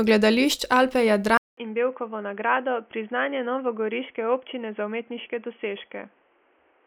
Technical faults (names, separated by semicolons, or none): input switched to a poorer device